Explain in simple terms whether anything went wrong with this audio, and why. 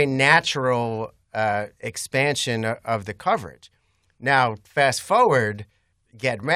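Nothing went wrong here: the speech recording has no audible technical faults at any point.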